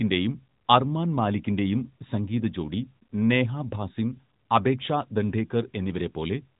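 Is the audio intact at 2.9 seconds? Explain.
Yes, the speech at 2.9 seconds is intact, with no fault at that moment.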